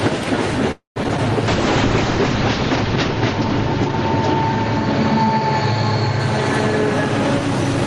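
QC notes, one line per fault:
0.71–0.98 s, call audio freeze: the sound stalls, the last fragment trails off and about 130 ms is silent before playback resumes where it stopped. Nothing is lost, but a 244 ms gap is inserted, likely from delayed packets draining the jitter buffer.
1.04–1.06 s, 1.08–1.11 s, 1.17–1.20 s, short concealed packet loss: three brief smears or wobbles. About 20 ms goes missing each time, with only 5 to 9 ms of extrapolated fill bridging it, so the audio jumps slightly ahead and the playout catches up a little.
1.48–6.41 s, call bitrate drop: the sound turns rough and muffled as the encoder falls from 32 kbps to 8 kbps, staying at the lowest rate for about 1.1 s. Audio bandwidth shrinks from 20 kHz to 8 kHz, removing the upper treble until the rate recovers.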